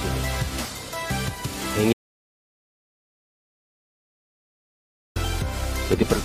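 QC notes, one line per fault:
1.93–5.16 s: audio dropout to silence. The sound cuts out abruptly for about 3.2 s of silence with no room tone, likely input lost while recording continued.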